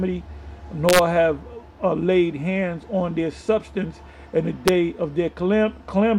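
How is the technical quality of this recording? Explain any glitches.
Two glitches come from integer overflow. At 0.89 to 0.99 s and again at 4.68 s, loud peaks wrap to the opposite sign instead of limiting. Each produces a violent crack, harsher than clipping.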